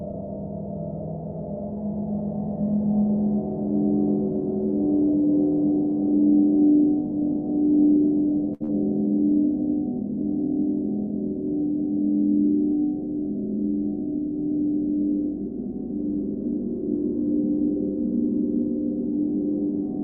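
At 8.53 s a late packet let the jitter buffer run dry, causing a short stall: the last sound is held for about 69 ms, until 8.62 s, with a faint buzz or dip before resuming. Right after, from 8.64 to 8.70 s, short concealed packet loss replaces 40 ms that never arrived with extended sound, leaving a brief smear or wobble. From 12.71 to 13.58 s, a jitter buffer speed-up trims roughly 70 ms of surplus buffered audio in small pitch-period cuts, so the sound runs about 7% fast at unchanged pitch and feels hurried.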